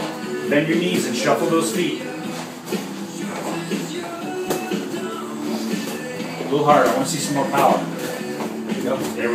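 No technical faults are audible.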